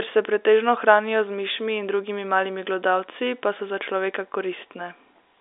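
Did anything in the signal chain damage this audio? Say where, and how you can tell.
No, nothing in the chain damaged the speech; it is ordinary G.711 A-law telephone audio, band-limited to roughly 300 Hz to 3.7 kHz with nothing above 4 kHz, as a normal phone line delivers it.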